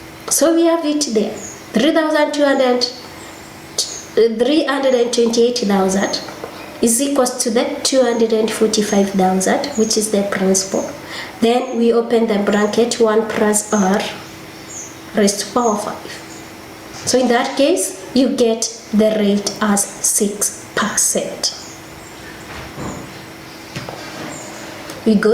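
Gain pumping runs through the whole clip: the gain swings by roughly 15 dB, ducking under each loud sound and squashing the dynamics. A fast limiter fighting excessive input gain is the likely cause.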